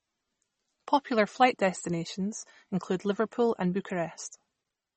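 Throughout the clip the speech carries plainly audible damage, likely from MP3 compression at a low bitrate, with the sound pointing to around 32 kbps. The encoder has cut everything above 8.3 kHz, dulling s sounds, and drops weak frequency lines from frame to frame, giving a watery, swirly texture and smeared consonant onsets. A spectrogram would show a hard, flat ceiling at 8.3 kHz and patchy holes flickering in the upper bands.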